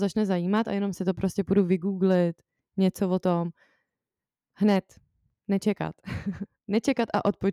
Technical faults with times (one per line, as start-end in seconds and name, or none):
none